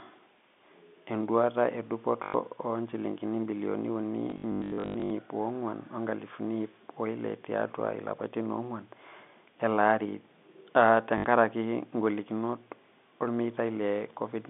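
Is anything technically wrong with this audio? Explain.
Yes. Packet loss with last packet repeated occurs at 2.24 to 2.34 s, just before "o injilingini bilioni uni", again from 4.3 to 5.1 s right after those words, and at 11.18 to 11.24 s. When packets went missing, the receiver replayed the last one until new audio arrived. The middle stretch holds about 540 ms of scattered gaps, none longer than 100 ms. The repeats fall out of step with the pitch, and the runs buzz at roughly 50 Hz, which fits 20 ms packets. This gives a short robotic stutter. On a waveform, the same block tiles over and over with a jump at each seam. On a spectrogram, these spots show frozen, evenly striped frames, all within the 200 Hz to 3.6 kHz telephone band of the G.711 coding.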